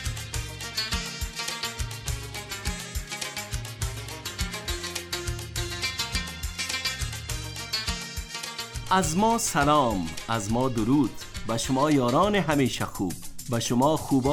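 No technical faults are audible anywhere in the audio.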